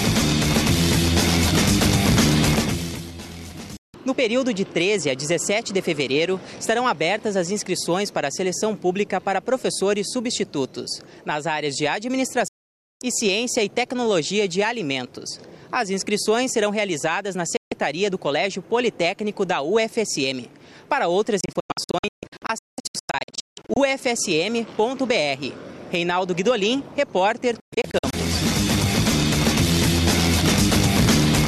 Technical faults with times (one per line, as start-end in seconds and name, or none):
3.77-3.94 digital broadcast dropout
12.48-13.02 digital broadcast dropout
17.57-17.72 digital broadcast dropout
21.41-23.77 digital broadcast dropout
27.60-28.14 digital broadcast dropout